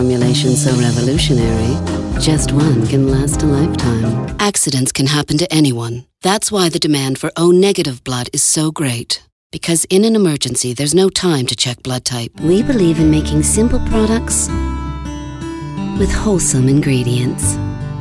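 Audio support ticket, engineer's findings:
No audible faults found; nothing to attribute to any component.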